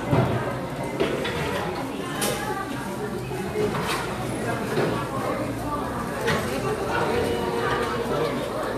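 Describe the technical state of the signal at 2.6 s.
At 2.6 s the everyday sound in the clip is intact, with no audible technical fault in the signal at that moment.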